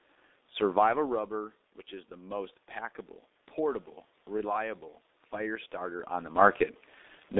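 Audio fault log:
throughout, G.723.1 codec: The speech is muffled and hoarse, and consonants are smeared. Nothing passes below 250 Hz or above 3.7 kHz. The damage is heavy. The coder rebuilds the voice coarsely in 30 ms frames, at a rate that points to about 6.3 kbit/s.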